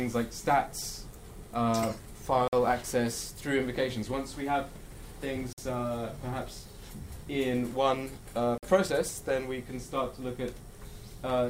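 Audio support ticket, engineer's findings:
Gap between chunks: three hard-edged 50 ms silences at 2.48, 5.53 and 8.58 s, one per 3 s of audio. Probable chunked transport or player starting each chunk late. Unlike a dropout, sound resumes exactly where it stopped, with nothing missing.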